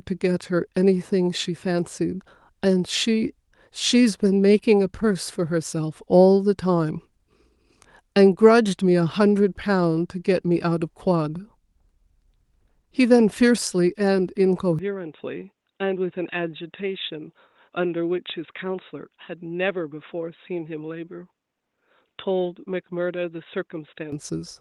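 Speech that turns dull at 14.79 s until 24.12 s, cut above 3.8 kHz and somewhat quieter, with a new faint noise floor, most likely an input switched to a poorer device rather than simple filtering.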